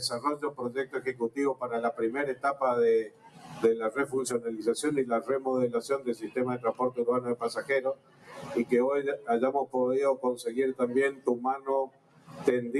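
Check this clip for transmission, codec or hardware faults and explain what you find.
One fault is active throughout, with six moments where it bites hardest.

A noise suppressor applied to music or sounds runs for the whole clip. The suppressor expects speech, so it treats steady, sustained content as background noise and pulls it down while letting sharp onsets through. Its gain moves over a range of roughly 15 dB, so the sound pumps and thins, with sustained parts and tails sagging behind each attack.

Sound cut by the noise suppressor is clearest at 0.43–0.62 s, 0.85–1.38 s, 3.04–3.63 s, 5.99–6.37 s, 7.95–8.5 s and 11.87–12.4 s. In each window the suppressor classifies the ongoing sound as noise and clamps it harder than the surrounding material, by about 11 dB at 0.43 s, about 12 dB at 5.99 s and about 14 dB in the other four. Held or decaying sound audibly collapses, and the drops last roughly 0.2 to 0.5 s.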